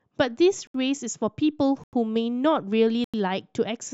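At 0.67 s the speech drops into a block of digital silence lasting 71 ms, and it happens again at 1.84 s and 3.04 s, each time for about 93 ms, a length that fits an unfilled 4096-sample buffer. The signal cuts out and returns with no fade. That abrupt hole is what separates it from a smoothed or concealed dropout.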